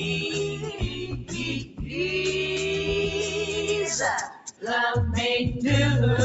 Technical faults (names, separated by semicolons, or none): noise suppressor applied to music or sounds; sound cut by the noise suppressor